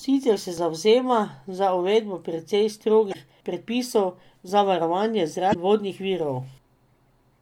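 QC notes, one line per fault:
3.10–3.15 s and 5.50–5.56 s, damaged data in a compressed stream: brief glitches, about 56 ms each, where corrupted frames are misdecoded until the decoder resyncs on the next header.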